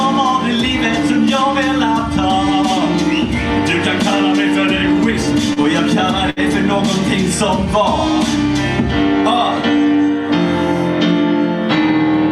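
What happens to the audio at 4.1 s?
Nothing goes wrong at 4.1 s; the audio passes through that moment intact, with no dropout, click, glitch or other fault.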